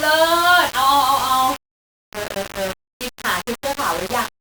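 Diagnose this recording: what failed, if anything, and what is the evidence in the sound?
Grainy, gritty distortion runs through the whole speech, tracking the sound and thickening on quieter passages, with the softest moments sputtering or cutting to silence. Low bit depth without dither at sample-format conversion is the likely cause: roughly 4-bit rounding leaves error only about 10 dB below the signal.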